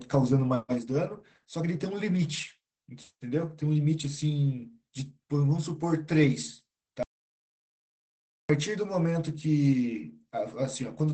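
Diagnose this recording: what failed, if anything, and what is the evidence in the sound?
Opus voice compression at the codec stage is present throughout the speech. It sounds muffled, slightly hoarse and robotic, with the band held to wideband, which fits SILK coding at about 12 kbps in 20 ms frames. The damage is even across the clip rather than bursty, which sets it apart from network loss.

An audio dropout to silence runs from 7.03 s to 8.49 s, about 1.47 s. The speech stops mid-flow into silence with no room tone, then resumes abruptly. Codec loss concealment would leave buzzing or smeared sound, so this points to the input, likely a lost device or link while silence was recorded.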